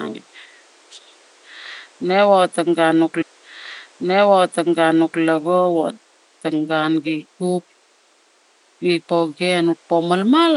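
A speech recording with one clear fault: a stream segment repeated. From 3.21 s to 5.20 s, about 2.0 s of the programme plays a second time. A small blip marks the jump back, and the replayed passage leads into "lago wotong gun gi". The player fetched or queued the same segment twice, so the timeline gains nearly two seconds. Faint room noise sits about 36 dB below the speech.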